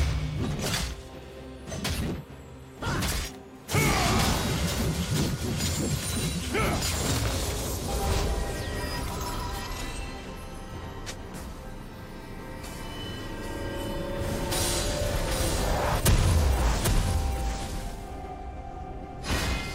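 From 12.39 s, a doubled audio track: a copy about 5 dB down trails by about 0.7 s, likely from a second capture or an edit, seen as a time-shifted repeat on the spectrogram.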